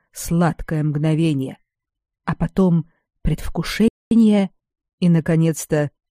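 At 3.88 s the audio cuts to silence for about 230 ms, resuming at 4.11 s. This is a playback stall: the output stopped mid-flow, most likely because the player's buffer ran dry or its audio thread was blocked, leaving nothing to send.

From 4.11 s to 5.99 s the player runs a time-compressed catch-up, removing small slices and cross-fading the joins to shed the backlog. The audio plays about 1.1 times faster at unchanged pitch, sounding hurried.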